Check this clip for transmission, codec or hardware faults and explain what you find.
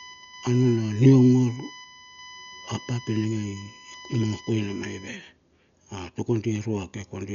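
Two faults are audible: a codec problem across the whole clip and an electrical whine in its first part.

Dolby Digital compression, likely, causes the dullness throughout. An encoder short on bits has cut the band so nothing survives above 6.9 kHz, and bare frequency lines are refilled with noise. That points to a very low bitrate, near 48 kbps. The speech sounds muffled, with heavy rough, fluttering grain.

USB whine runs from 0.0 to 5.08 s. Current drawn in the bus's 1 ms frames leaks through power or ground into the audio path. The result is a steady 1 kHz whine, loudest at its 2 kHz harmonic, roughly 20 dB below the speech.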